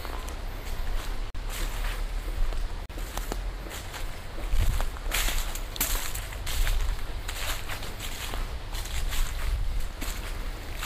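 The everyday sound cuts briefly to silence twice, at 1.30 to 1.36 s and again at 2.86 to 2.91 s, each gap about 40 ms, before carrying on. These are likely Bluetooth stalls, where delayed packets let the receiving buffer run empty and playback paused.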